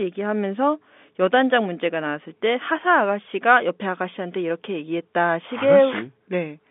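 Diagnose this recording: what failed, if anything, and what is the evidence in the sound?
Nothing failed: the speech sits in a 200 Hz to 3.6 kHz band consistent with G.711 telephone coding, and no stage from wiring through codec to playback shows a defect.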